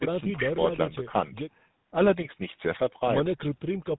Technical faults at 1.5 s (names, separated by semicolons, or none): GSM full-rate codec